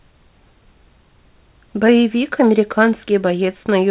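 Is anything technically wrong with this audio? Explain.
Yes. From 1.87 to 1.89 s there is a short concealed packet loss. About 10 ms of audio never arrived, so the receiver extended the preceding sound and blended back, leaving a brief smear rather than a silent gap or click. The sound stops at 4 kHz, which fits a G.711 call codec.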